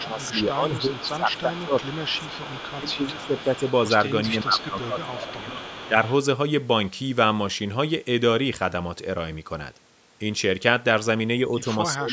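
From 0.0 to 2.27 s, again from 2.77 to 3.62 s and from 4.28 to 5.96 s, the speech dips by up to about 15 dB in short pieces. This is speech suppressed in double talk, likely an echo canceller turning the near talker down while the far side spoke. On the waveform the envelope shows sudden notches. Overlapping this, from 0.03 to 6.13 s, an echo leak is heard: a faint copy of the speech about 20 dB down, trailing by 376 ms, likely loudspeaker sound the canceller failed to remove. On a spectrogram it appears as a weaker, shifted ghost of the speech harmonics. A final suppression from 11.93 s to the end cuts the level by about 20 dB.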